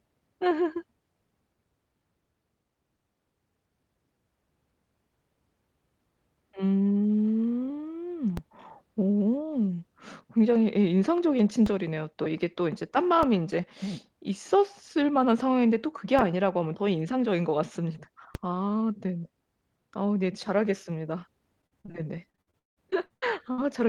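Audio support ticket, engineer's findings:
DC step: low thumps at 8.37, 11.66, 13.23, 16.19 and 18.35 s. The offset switches in and out, then holds to the end. Likely converter recalibration or an offset input being switched in.

Repeated packet loss (robotic sound), 21.61 to 23.60 s: choppy speech. There are 14 holes, the longest 175 ms. Concealment stretches the last sound across about a third of the span.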